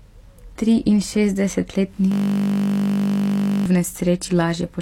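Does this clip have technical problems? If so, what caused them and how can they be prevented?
Yes. From 2.12 to 3.66 s the speech turns into a steady 50 Hz buzz: a system hang loop, where the system froze and the audio hardware kept replaying the same 20 ms of its ring buffer dozens of times. Preventing it means fixing the driver or system stall and adding a watchdog that mutes output when the buffer stops refreshing.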